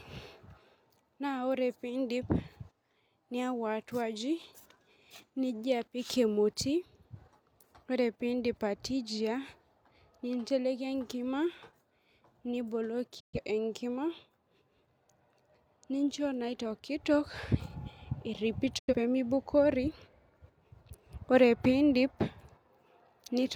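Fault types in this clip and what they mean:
Digital broadcast dropout: The receiver stopped getting usable frames and muted until clean ones returned. Here the speech fades out within about 8 ms into silence twice, from 13.20 to 13.38 s and from 18.79 to 18.94 s. Everything sent during those gaps is lost.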